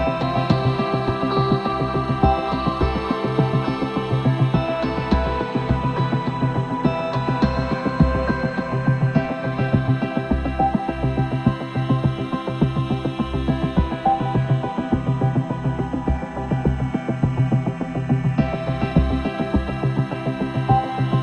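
No technical faults are audible anywhere in the audio.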